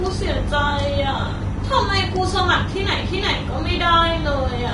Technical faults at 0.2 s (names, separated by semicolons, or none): Vorbis compression